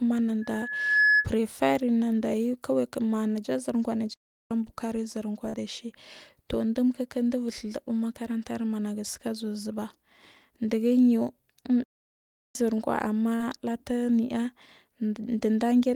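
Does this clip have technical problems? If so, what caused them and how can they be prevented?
Yes. From 0.41 to 1.29 s there's loudspeaker feedback squeal: the mic picks up its own speaker, and a 1.7 kHz tone swells over about half a second to roughly 5 dB above the speech. Turning down the monitor gain, moving the mic off-axis from the speaker, or adding a notch filter would stop it.

There are two playback stalls where the sound just drops out. One runs from 4.14 to 4.51 s (0.37 s) and the other from 11.84 to 12.55 s (0.71 s). The player was likely starved of data. A bigger playback buffer would ride through those gaps.

There's also short concealed packet loss, heard as brief smears. One is at 5.49 to 5.55 s, just before "ɗaci tur", where 40 ms was missing and patched by extending the previous sound. The other is at 13.35 to 13.42 s, where 40 ms was patched with about 44 ms. Forward error correction or a slightly deeper jitter buffer would reduce these.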